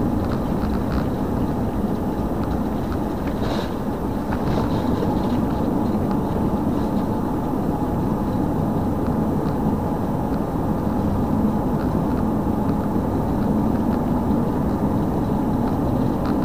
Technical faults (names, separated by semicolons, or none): none